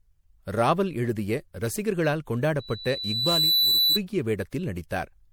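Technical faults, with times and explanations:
Throughout: generation loss. The speech sounds swirly, smeared and hollow, and consonant attacks are blurred. Nothing is present above 20.8 kHz. The damage goes beyond what a single pass would leave. The likely cause is repeated lossy MP3 coding, about four times over, at a rate that fits 96 kbit/s. Each decode and re-encode quantises again on a shifted frame grid. The noise and spectral holes from every pass pile up.
2.59 to 4.0 s: loudspeaker feedback squeal. Right after "ராவல் எழுதிய ரசிகர்களால்", a single tone at 4 kHz appears. It swells over roughly a second into a squeal. It peaks at about 5 dB above the speech, then stops at 4.0 s. A microphone was picking up the loudspeaker it fed. At 4 kHz the loop gain went above one, so that frequency fed on itself and grew by itself.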